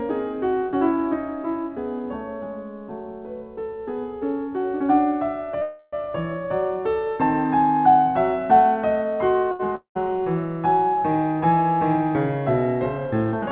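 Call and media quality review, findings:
Call audio freeze, 5.62–5.95 s: music halts and the last sound continues as a fading buzz for about 305 ms, then resumes where it stopped with nothing lost. The likely cause is delayed packets emptying the jitter buffer, with concealment filling the wait.

Short stall from a late packet, 9.52–9.61 s: one sound held about 77 ms too long, with a slight buzz. A late packet emptied the jitter buffer and the receiver stretched the last audio until it arrived. Playback then continues from the same point, adding delay.

Long network dropout, 9.75–9.97 s: a fading buzz, then about 110 ms of silence. Music returns further on, with about 220 ms of content gone. Likely a run of packets that never arrived, so concealment decayed to silence. Overall delay ends slightly lower.

Jitter buffer speed-up, 13.25–13.47 s: music rushes at about 113% speed at unchanged pitch and the tempo wavers. 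The buffer held excess audio and the receiver cut short pitch-period pieces, roughly 40 ms in total, to reduce delay.

Band-limited to 4 kHz throughout, consistent with a narrowband G.711 call path.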